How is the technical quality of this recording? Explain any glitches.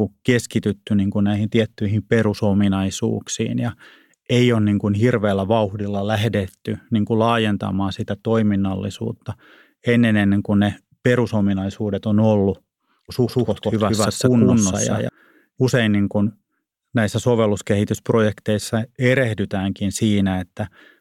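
The recording has one clear glitch: a doubled audio track in the speech from 13.27 to 15.09 s, ending just before "usein niin kuin". A second, full-band copy of the speech runs about a fifth of a second behind the first, at roughly the same level, so every syllable is echoed with no decay or room colour. It switches on and off abruptly. The likely cause is the signal being captured twice through paths of different latency. On a spectrogram, each harmonic pattern appears twice, offset by a fixed gap. On the waveform, the envelope shows paired bursts.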